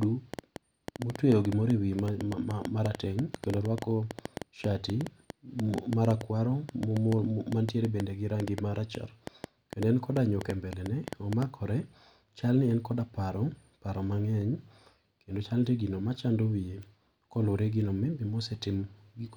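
From 0.03 s to 11.43 s a train of clicks runs over the speech: around 70 similar pulses at an uneven pace averaging about 6.1 per second, peaking roughly 10 dB above the signal. They tick through pauses too, likely from electrical interference or a faulty connection.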